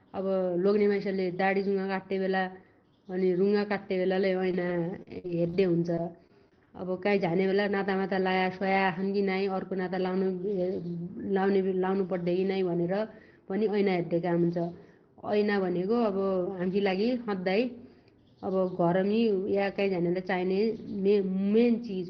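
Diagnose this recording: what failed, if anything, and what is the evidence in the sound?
What failed is the network, with repeated packet loss giving that robotic sound in two bursts: 4.51 to 5.55 s and 5.95 to 6.75 s. Each burst has four short holes, the longest about 54 ms in the first and 23 ms in the second. The receiver patches each one by stretching the last bit of sound, so you hear a choppy stutter with pieces missing. The call codec's top end stops near 6 kHz, which fits Opus at a low bitrate around 20 kbps.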